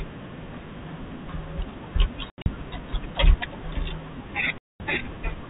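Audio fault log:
2.30 to 2.46 s, packet loss filled with silence: about 120 ms of audio drops out in several short holes scattered over 160 ms, the longest gap 80 ms. Each missing piece becomes dead silence, cut in and out abruptly, so the edges are hard.
4.58 to 4.80 s, packet loss filled with silence: one solid 220 ms hole with hard edges. Gap lengths step in 20 ms units, which fits 20 ms packets on the narrowband telephone line.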